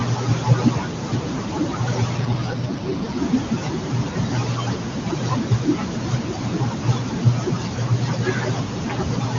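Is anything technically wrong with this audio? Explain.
Yes, three things stand out.

Noise suppressor artifacts run through the whole clip. The suppressor pulls down bands it judges steady noise frame by frame, so the leftover room noise pumps around the speech.

Speech cut by the noise suppressor shows up from start to finish. The suppressor mistakes parts of the speech for noise and dips them by up to about 19 dB, so soft consonants and endings sound swallowed.

An AMR rate drop hits from 2.17 to 3.18 s. The speech turns rougher and more synthetic with no gap or bandwidth change, which fits the AMR-WB codec stepping down from 23.85 to 8.85 kbit/s before recovering.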